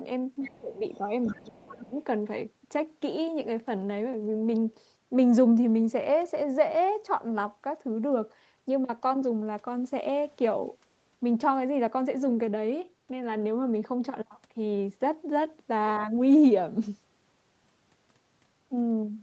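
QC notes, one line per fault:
0.42–0.6 s, 1.24–1.54 s and 15.95–16.06 s: other side's voice leaking through. A second talker sits well under the main speech, about 20 to 30 dB down and fading with each occurrence. It is an added voice rather than a dip in the talker, likely loudspeaker echo that the canceller left in the microphone signal.
0.6–1.12 s, 1.29–1.96 s and 10.71–10.75 s: speech suppressed in double talk. The talker's own level drops, by up to roughly 15 to 20 dB in the first two spans and only slightly in the brief third one, while the far side plays on the loudspeaker. The voice itself sinks rather than gaining a stray one, likely because the canceller could not separate it from the echo and attenuated both.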